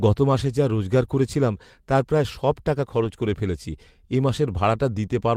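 A speech clip with a lost packet rebuilt from error correction from 3.03 to 3.09 s. For about 40 ms the sound turns rougher and noisier but never drops out, which fits two lost 20 ms packets replaced by the low-bitrate copies carried in the packets that followed. A decoder guessing the audio with no data would produce a smeared or fading stretch. Here the content is still the real speech, only coarser, under the added grain.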